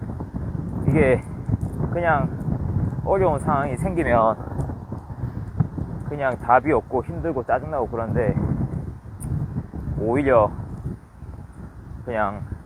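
No technical faults are audible.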